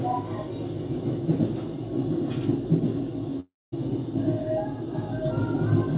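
At 3.4 s the incoming audio stops arriving, most likely a long network dropout in which a stretch of packets never reached the receiver. The receiver fills the gap by stretching the last sound into a fading buzz or hiss for about a third of a second, and about 0.22 s of that stretch settles into near silence. Sound resumes at 3.74 s, and roughly 320 ms of the original is simply gone.

From 4.55 s to 5.53 s a loudspeaker feedback squeal appears. A microphone is picking up the loudspeaker it drives, and at 4.4 kHz the loop gain climbs past one, so that frequency keeps feeding itself. It swells over roughly 0.4 s into a single-pitched squeal, sitting about 5 dB above the rest of the sound.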